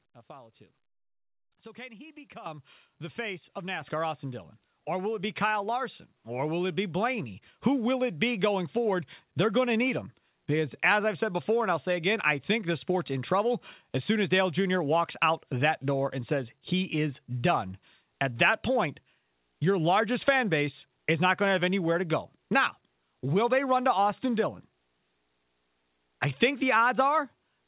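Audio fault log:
2.46, 3.81 and 5.19 s, microphone volume stepped up: the input level jumps about 10 dB after "can he", about 5 dB after "the face of", and about 2 dB after "will it". Voice and background rise together, shown as sharp steps in the waveform envelope and a brightening across the spectrogram's telephone band below 4 kHz.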